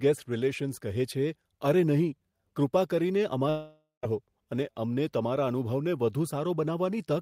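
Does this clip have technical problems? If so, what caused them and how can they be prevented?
Yes. From 3.49 s to 4.05 s the speech breaks off: the last sound is stretched into a buzzy hiss that fades away, about 170 ms of near silence follows, and the speech resumes with roughly half a second of it gone. This is likely a long network dropout: the audio stopped arriving, the receiver filled the gap by extending and fading what it last had, then ran out. A steadier connection, with more jitter buffering or redundancy, would prevent it.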